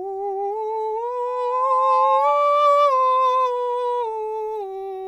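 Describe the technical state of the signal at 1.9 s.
A microphone-to-speaker loop exceeds unity gain at 861 Hz, causing loudspeaker feedback squeal from 1.27 to 2.54 s: a tone swelling within a second to override the music.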